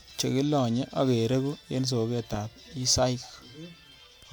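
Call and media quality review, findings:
No faults found in the speech recording. Nothing to log against any component.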